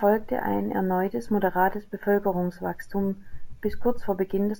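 Throughout the speech, imaging from sample-and-hold upsampling adds a bright metallic fizz that tracks loudness. It fits 16 kHz audio raised to 48 kHz by repeating samples. A spectrogram shows a mirrored copy between 8 and 16 kHz, about 24 dB down. The waveform shows small staircase steps.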